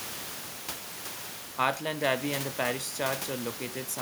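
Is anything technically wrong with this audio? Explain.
No, there are no faults.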